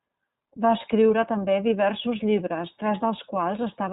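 Throughout the speech, the audio has passed through the iLBC codec. It codes each 30 ms frame's excitation independently at a rate that fits 13.33 kbps. Nothing above 4 kHz survives, so the voice sounds muffled and narrowband, with a plainly audible rough, synthetic edge.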